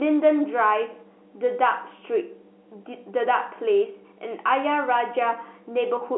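No technical faults turn up anywhere in this speech recording. The G.711 telephone coding path sounds as expected, with the sound confined to a telephone band of roughly 250 Hz to 3.4 kHz and any coding noise faint at most.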